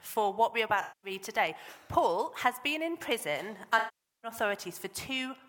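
AAC frame loss with concealment affects the audio at 0.82–1.11 s and 3.78–4.30 s. Missing frames, which fits roughly ten and then twenty lost, are rebuilt from the last good spectrum, giving a smeared, noisy patch the first time and a decay to a very faint noise floor that fades back in the second, seen as blurred bands on a spectrogram. CD scratch ticks fall between 1.47 and 2.06 s: four sub-millisecond clicks, one per disc revolution, from a blemish. They appear as thin vertical spikes in the waveform.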